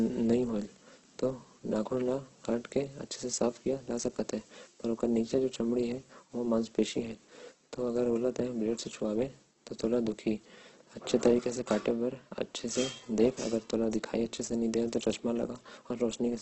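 Throughout, heavy Opus compression, likely near 12 kbps, makes the speech rough and grainy; a spectrogram shows noise-filled bands cut off sharply at 8.2 kHz.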